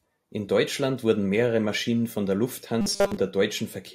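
Robotic sound from repeated short buffers runs from 2.81 to 3.17 s, where the speech turns into a rigid, metallic buzz pitched at 200 Hz that only loosely tracks the words. The likely cause is audio arriving too seldom, so the software fills the gaps by looping a very short slice, which fits a buffer of about 5 ms. Most of the stretch is made of these repeats rather than real audio.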